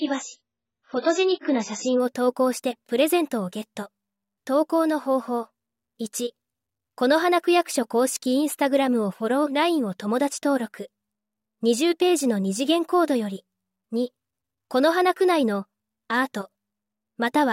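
Adaptive stream starting at a low bitrate, from 0.0 to 2.0 s: for the first two seconds the audio has nothing above 7.6 kHz, so it sounds dull and carries heavier codec artefacts, which fits a very low-bitrate AAC start near 12 kbit/s. The player begins on that cheap version to get playback going quickly. Once it has measured the connection it steps up, pointing to around 96 kbit/s, and the treble returns suddenly at 2.0 s with no gap in the sound.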